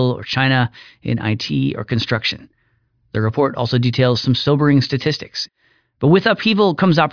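Speech, with no audible faults.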